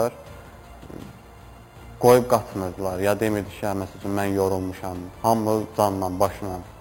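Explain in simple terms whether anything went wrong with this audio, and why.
Yes. From start to end there is imaging from sample-and-hold upsampling. The sound was raised to a higher rate, likely from about 11 kHz, by repeating each sample without smoothing. Mirror copies of the sound above 5.5 kHz add a bright, metallic fizz.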